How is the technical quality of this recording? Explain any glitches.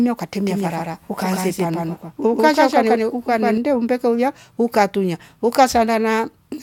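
The recording has one clear glitch. A doubled audio track runs from 0.46 to 3.58 s, starting just before "umbeka uya ukatunya". It was likely caused by a second, slower capture path. A dry copy at about the same level trails roughly 150 ms behind, giving an abrupt, echo-like smear.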